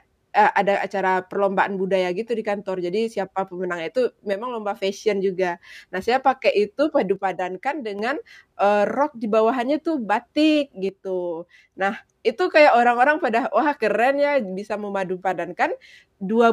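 One channel drops out three times in this speech clip: 4.33 to 4.76 s, right after "jadi siapa pemenangnya tuh" and before "fashion juga"; 7.16 to 7.99 s, after "saya pakai itu"; and 10.89 to 11.75 s, after "di bawahannya itu batik". Each time the sound abruptly dips by about 6 dB, then returns at full level. The likely cause is one stereo side going silent, so the mono sum carries only half the shared signal.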